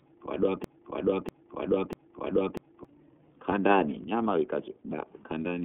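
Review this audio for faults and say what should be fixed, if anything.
A broken-record loop is already under way when the speech begins and lasts until 2.85 s. A fragment about 0.64 s long repeats exactly, back to back, three times, so the speech that should have filled those first seconds is missing. This likely comes from a stalled player, encoder or stream that kept resending the last fragment held in its buffer. Preventing it needs stall detection that drops or flags repeated buffers instead of replaying them.

iLBC codec damage runs through the whole clip. The speech is band-limited to roughly 250 Hz to 3.5 kHz, with nothing above 3.7 kHz, and has a plainly audible rough, synthetic texture. The bitrate fits iLBC's 30 ms frame mode at 13.33 kbps. In this codec each frame's excitation is coded independently, which trades smoothness for robustness and produces the grainy character heard here. 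Preventing it means using a wideband codec at a higher bitrate on this path, or capturing before the iLBC link.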